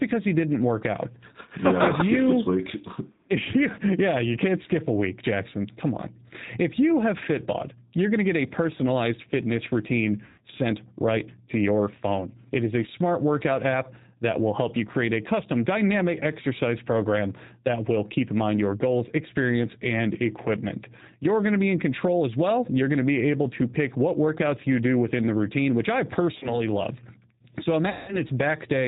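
The speech passes through a G.729 codec (the G.729A variant) at 8 kbit/s for its whole length. The codec rebuilds each 10 ms frame from a vocal tract filter, a pitch predictor and a few coded pulses, and it discards everything above 4 kHz. The damage is plainly audible: the speech sounds band-limited, rough and slightly synthetic throughout. On top of this, VoIP packet loss concealed by the speech codec breaks up the audio three times. Each time, packets went missing and the decoder filled the gap by extending its last pitch and filter while lowering the gain. The first gap comes after "a personalized fitness routine", from 10.26 to 10.42 s, where 120 ms of audio was lost. The second follows "the routine which I", from 26.39 to 26.71 s, and loses only 30 ms of audio, which points to a single lost packet. The third runs from 27.90 to 28.19 s with 180 ms missing. In each gap the speech is stretched into a fading buzzy tone or coloured noise. 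It then stays weak or distorted for a short while after packets return, because each new frame is predicted from the corrupted one before it.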